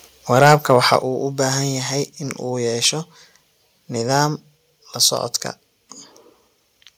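Microphone overload runs from 0.36 to 0.96 s: the loudest peaks of the speech come out flattened and carry a harsh, crackling edge. The likely cause is input gain set about 6 dB too high, so roughly one or two percent of samples hit the converter's ceiling.

Microphone volume stepped down at 1.02 s: the speech and the background together drop abruptly by about 6 dB, right after the distorted stretch. This is likely the call software detecting the overload and cutting the device's input volume in a single step.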